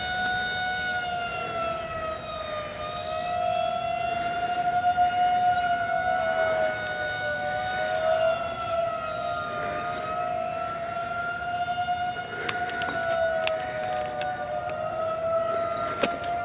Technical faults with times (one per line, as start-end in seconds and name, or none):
none